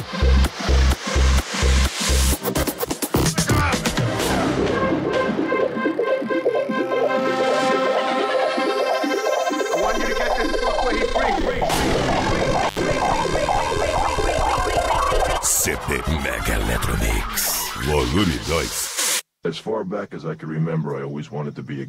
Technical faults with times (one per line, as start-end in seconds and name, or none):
12.67-12.79 intermittent contact